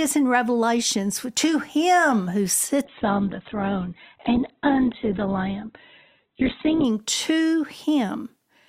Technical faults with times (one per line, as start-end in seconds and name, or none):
2.84-6.84 adaptive stream at a lower bitrate